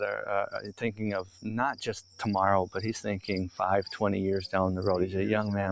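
Held and fading parts of the sound keep sinking and swelling while attacks punch through, so the clip pumps and thins by around 10 dB throughout. That is a noise suppressor applied to music or sounds: speech-tuned processing mistakes sustained tones, ambience and decay for background noise and pulls them down, letting the sudden onsets mostly pass. The band tops out at 8 kHz, as a call microphone path allows. Three distinct dips stand out as sound cut by the noise suppressor: from 0.52 to 1.03 s and from 1.21 to 1.52 s the level drops by about 13 dB, and from 1.99 to 2.23 s by about 10 dB. In each stretch the steady or trailing material is clipped short and sunk under its attack, because the suppressor judged that portion to be noise and attenuated it harder than the rest.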